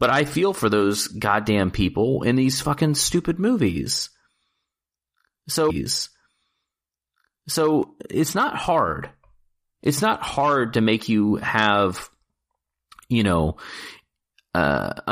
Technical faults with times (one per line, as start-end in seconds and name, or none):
5.69-7.69 stream segment repeated